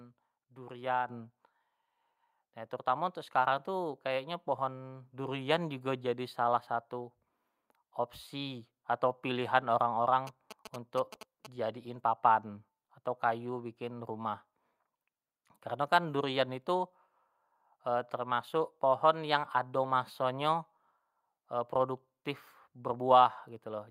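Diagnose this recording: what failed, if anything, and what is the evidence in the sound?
Microphone volume stepped up at 1.08 s. Speech and background jump together by about 5 dB. Call processing raised the device input gain in one step.

GSM signalling bursts enter the analogue wiring from 10.27 to 11.47 s, before "jadiin papan atau kayu". Galloping ticks and 217 Hz buzzes sit well below the speech. Circuitry rectifies a nearby phone's radio bursts.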